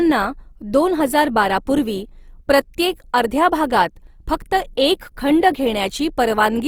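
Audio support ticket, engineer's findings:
Grainy, rough texture on the speech for the whole clip, with fullband top end still there but fizzy. Likely Opus compression in music (CELT) mode: bands starved of bits get filled with folded or noise content. Plainly audible, fits roughly 24 kbps.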